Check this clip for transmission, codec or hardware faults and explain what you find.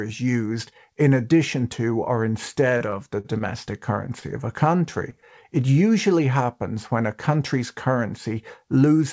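Three kinds of transmission fault are audible in this speech, all from packets arriving late or not at all on a call path whose band stops at 8 kHz, which fits a G.722 link at 64 kbps.

From 2.78 to 3.42 s there is repeated packet loss (robotic sound): the speech turns choppy, with four separate patches where the sound is carried on artificially, about 104 ms of fill in all, roughly a sixth of that stretch. Packets kept failing to arrive, so the receiver repeatedly extended the last sound to cover each hole. Some of the speech is genuinely gone, 40 ms of it, which was also the longest single gap.

From 4.20 to 4.24 s there is a short stall from a late packet: a sound is held about 16 ms too long before the speech resumes. The packet was not there when due, the jitter buffer ran dry, and the receiver stretched the last sound until it arrived, then picked up where it left off. Nothing is lost, but the delay through the path grows by 16 ms.

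At 5.10 to 5.14 s and again at 5.20 to 5.24 s there is a short concealed packet loss: each is a brief smear of about 21 ms where the real audio is replaced by a continuation of what came before. In each case 20 ms of the call never reached the decoder in time, and the receiver filled the gap from the preceding sound before blending back into the real signal.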